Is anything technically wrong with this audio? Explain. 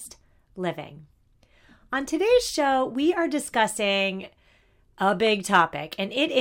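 Yes. At 5.27 s a brief burst of noise blips sounds over the speech. This is DAB burbling: weak reception let a small fraction of bit errors past error correction into the MP2 data, putting short blips of noise in individual sub-bands across what sounds like a few corrupted frames.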